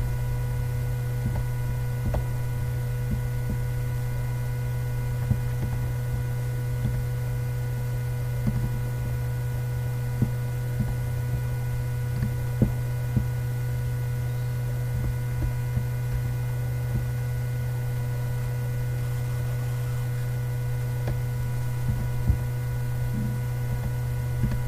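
Nothing stood out as a technical fault on listening.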